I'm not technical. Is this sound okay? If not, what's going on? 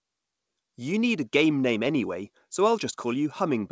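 Yes, this sound is okay; it just has the slightly dulled top end of an ordinary internet call, with nothing above 8 kHz.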